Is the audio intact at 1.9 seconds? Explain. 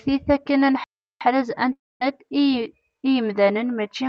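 No. A long network dropout, likely from packets ceasing to arrive, spans 1.72 to 2.02 s. A fading buzz turns to silence, and about 0.3 s is lost.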